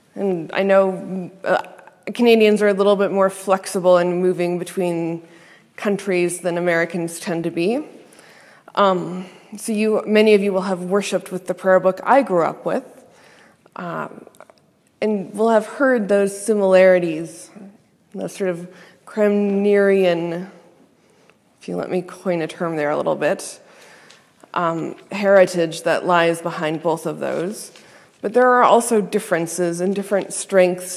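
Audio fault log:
Nothing wrong turns up anywhere in this one, so there's nothing to log.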